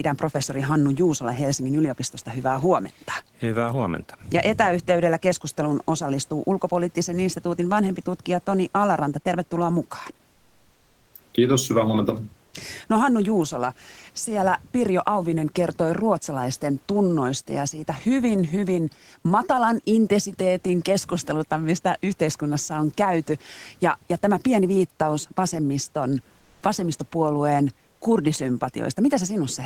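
At 10.31 to 11.13 s, then at 26.39 to 26.61 s after "tämä pieni viittaus vasemmiston", and at 27.91 to 28.01 s after "pieni viittaus vasemmiston vasemmistopuolueen", the faint room noise, sitting about 40 dB below the loudest speech, turns flat and featureless and drops about 3 dB, then about 1 dB. This is comfort noise in place of the background, likely from Opus DTX halting transmission in pauses while the receiver synthesises filler noise.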